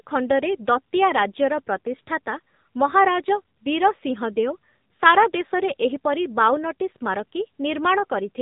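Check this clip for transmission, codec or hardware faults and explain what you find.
One codec fault runs through the whole recording. Across all of it, the speech sounds muffled, buzzy and synthetic. That is the AMR narrowband mobile codec: a vocal-tract model with sparse pulses, nothing above 4 kHz, and damage consistent with a 7.4 kbps mode.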